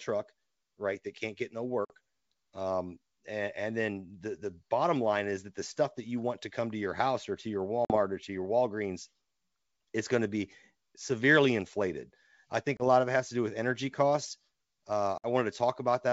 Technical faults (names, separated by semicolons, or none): packet loss on an ADPCM call